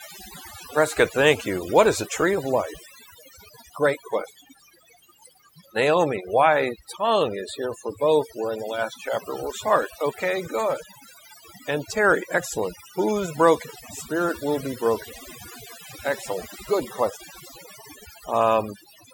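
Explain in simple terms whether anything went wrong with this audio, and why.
Something did go wrong, from start to finish. The problem is overdone noise removal. A cleanup tool was pushed too hard. It turned down the background noise but also quiet parts of the speech. The gaps drop away and break up into twinkling, warbling specks.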